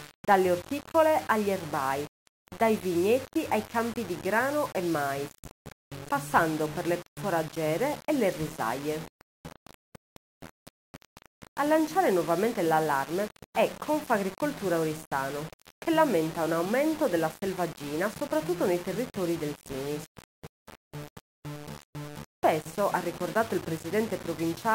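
The audio is grainy from start to finish. The distortion follows the signal, and quiet passages turn gritty or sputter. This is low bit depth without dither, likely rounding to about 5 bits. The error sits roughly 15 dB below the signal.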